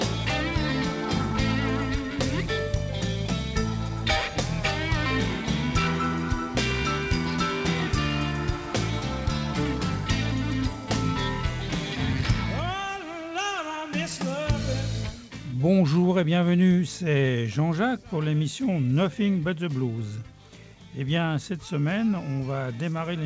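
No faults can be heard.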